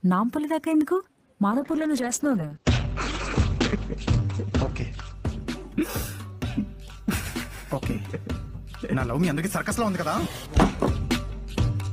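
From 1.51 s to 6.21 s there is a call bitrate drop. The call's bandwidth estimate fell, so the encoder spent far fewer bits. The top end narrows from 20 kHz to 8 kHz, and the sound turns coarse and watery, worst for about 3.4 s. That fits a fall from roughly 32 kbps to 9 kbps. Unlike a plain low-pass filter, it also adds coding roughness, and unlike packet loss, nothing drops out or stutters.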